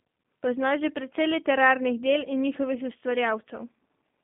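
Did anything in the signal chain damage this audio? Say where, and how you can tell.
Yes: G.729 codec damage throughout. Nothing passes above 3.5 kHz, and the rough, synthetic, pulse-rebuilt texture, unlike a clean band-limited phone line, fits an 8 kbit/s coder.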